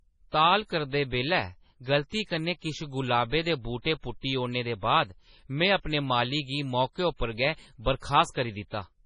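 From start to finish the speech carries heavy MP3 compression artefacts, likely from encoding at a very low bitrate, consistent with about 24 kbps. Nothing remains above 10.4 kHz, and weak spectral detail flickers between frames, giving a watery, swirling texture with chirpy sibilants and smeared onsets.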